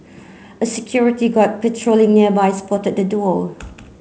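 No technical faults are audible.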